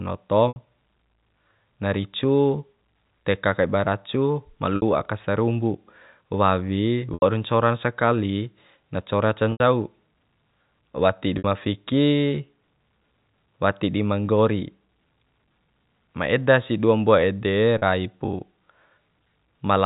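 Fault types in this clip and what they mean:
Packet loss with pitch repetition: six brief held, buzzy patches lasting 40 to 80 ms, as the receiver repeated the last pitch period over missing packets.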